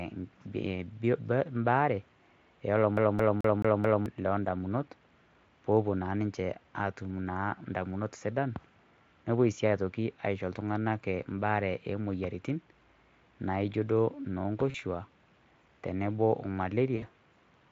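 From 2.97 to 4.06 s the speech stutters rapidly and evenly, a slice of about 0.22 s repeating five times with a brief mute at each jump. This is a CD stuck on one turn: a scratch keeps knocking the laser back one track at the same point on every rotation.

At 14.70 to 14.76 s, and again at 16.96 to 17.06 s just after "tenebo o", the voice smears into a fading, stretched sound and stays weak for a moment afterwards. This is VoIP packet loss concealed by the speech codec. About 40 ms and then 60 ms of audio went missing, which fits two and then three lost 20 ms frames. The decoder filled each gap by extending its last pitch and filter at falling gain.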